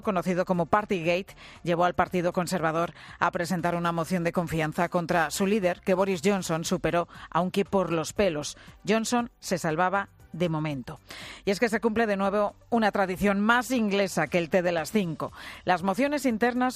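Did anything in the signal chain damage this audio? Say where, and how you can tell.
Yes. Between about 3.64 and 6.81 s there's crude rate conversion, a sample-format conversion stage doing a resample without any filtering. It sounds like a gritty, inharmonic fizz riding on the louder and brighter parts, sitting roughly 25 dB under the signal. The pattern fits a 44.1 kHz to 48 kHz step done by nearest-sample picking, so samples get repeated on a fixed cycle and throw off shifted, inharmonic copies of the actual audio.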